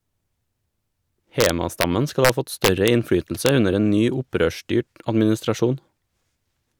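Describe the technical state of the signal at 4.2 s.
At 4.2 s the signal is intact, with no audible dropout, clipping, distortion or other fault at that moment.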